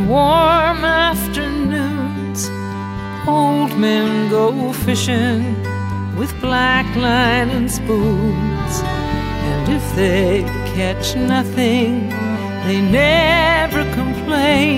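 Nothing goes wrong anywhere in this audio; there are no technical faults to point out.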